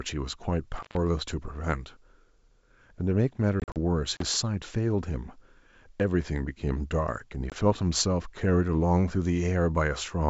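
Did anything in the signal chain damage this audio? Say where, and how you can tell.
Yes. Intermittent contact in the analogue wiring: at 0.75–0.97 s and 4.15–4.23 s the sound drops out for about 128 ms and 33 ms, crackling at the edges. The waveform collapses to low hiss between spiky edges.

Packet loss on this G.722 ADPCM call, in the network: holes at 3.60–3.77 s (100 ms lost, longest run 40 ms) and 7.50–7.56 s (20 ms). These show as hard-edged blank gaps on the spectrogram, then slightly distorted speech while the decoder resynchronises.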